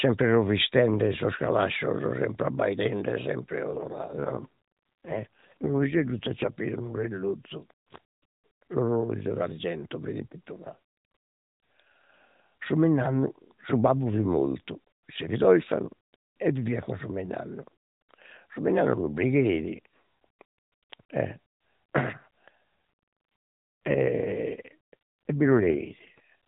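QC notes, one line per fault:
3.74–6.50 s and 23.86–26.20 s: AMR rate drop. The speech turns buzzier and more synthetic with no gap and the same 4 kHz band, which points to a step from 12.2 to 5.9 kbps.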